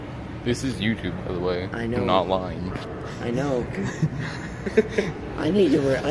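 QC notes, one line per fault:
No faults detected.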